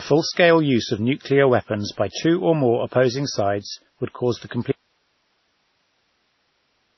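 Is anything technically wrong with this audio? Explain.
Yes, two things. The whole clip has nothing above 5.9 kHz and a smeary mix of artefacts, likely from transcoding between lossy codecs, something like low-bitrate WMA re-encoded to MP3.

At 4.72 s, right after "sides would cause the", the speech cuts out abruptly and only hiss remains, roughly 50 dB down, until the end. That's likely an audio dropout to a faint residue: the signal was lost but the downstream path stayed live.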